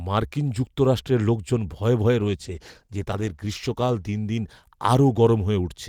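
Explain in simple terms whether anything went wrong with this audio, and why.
A call bitrate drop starts at about 2.2 s and lasts until 5.85 s. The call's connection seemed to weaken, so the system squeezed the speech into far less data. It sounds rougher and more muffled, losing its crisp upper detail, and is at its worst for nearly two seconds.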